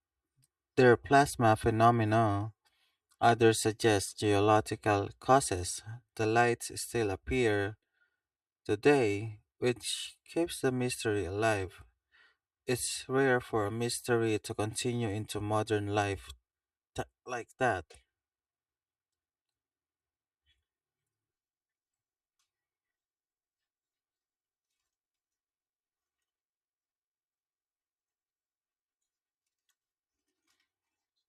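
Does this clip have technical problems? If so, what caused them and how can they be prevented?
Yes. Throughout the speech there is channel delay (comb filtering). One channel arrives roughly 3 ms behind the other, and when the two are folded to mono the shared content cancels at evenly spaced frequencies starting near 200 Hz. The result is a hollow, phasey tone. Unlike flanging, the notches never sweep, and unlike codec smearing they stay fixed regardless of what is being said. To prevent it, align the channels' timing before summing, or keep the fold-down to a single channel.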